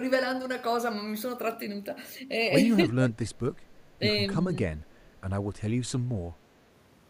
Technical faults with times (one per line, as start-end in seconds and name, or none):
2.85-3.56 speech suppressed in double talk
4.63-7.10 audio dropout to a faint residue